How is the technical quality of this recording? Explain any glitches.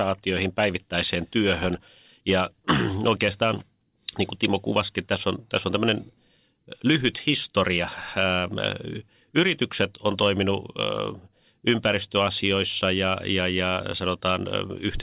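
No glitches or faults heard.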